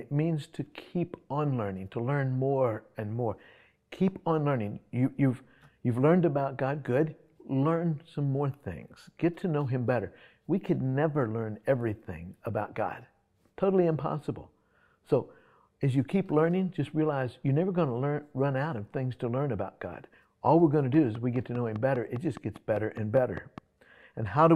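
A train of clicks runs from 20.94 to 23.59 s: around fifteen near-identical pulses at a regular 4.9 per second, peaking about 5 dB above the surrounding sound. It is heard as steady ticking, likely interference from nearby equipment or a faulty connection or power supply.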